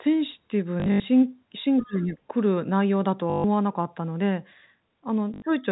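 Speech over a call, marred by three short robotic stutters and a brief exchange where two voices collide. From 0.8 to 1.04 s the sound catches and repeats in choppy fragments, with a buzzy 50 Hz edge. The same happens more briefly from 3.3 to 3.44 s and from 5.34 to 5.42 s. This is packet loss with the last packet repeated. Audio went missing and the receiver kept replaying the final piece it had until fresh audio arrived. The first burst loses 160 ms scattered across 240 ms, with its longest gap 80 ms. The later ones lose 140 ms and 80 ms. The stutter rate fits 20 ms packets. At 1.78 to 1.86 s a faint second voice, about 25 dB below the talker, slips through, and this is most likely the other side's voice leaking through from a loudspeaker that the echo canceller did not fully remove. Straight after, from 1.84 to 2.17 s, the talker's own voice dips and breaks up, falling by around 20 dB at its deepest over about a third of a second. 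That matches speech suppressed in double talk: with both sides active, the canceller could not tell its talker from the echo and turned both down.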